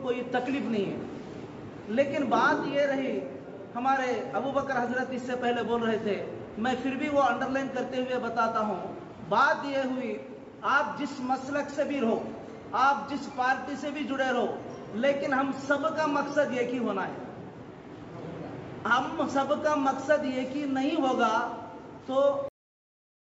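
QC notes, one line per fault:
22.48 s, cut-off end: the sound halts abruptly mid-event and falls straight to digital silence with no decay, staying dead for the final 0.9 s. The last buffers were never written or played out, so the audio is truncated rather than faded.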